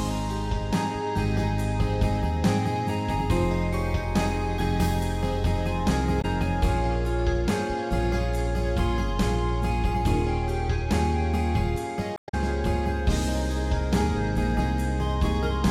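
At 6.18 to 6.25 s and again at 12.14 to 12.34 s there is damaged data in a compressed stream. Corrupt bytes make the decoder misread its frames and hunt for the next valid header, producing a short chirp or squawk. On a spectrogram each appears as an abrupt block of smeared broadband energy with hard vertical edges. The waveform shows a sudden discontinuity in shape, the second lasting about 0.2 s.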